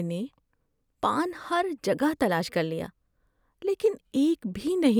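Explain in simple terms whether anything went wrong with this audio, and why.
Something did go wrong: from 1.16 s to 3.16 s the speech runs about 5.3% fast and rises in pitch by 89 cents, just under a semitone, then snaps back to normal. This is a drift correction step, likely from software that keeps two device clocks in line and briefly sped up playback in one jump to drain its buffer. Because speed and pitch move together, the voice sounds hurried and higher for those two seconds.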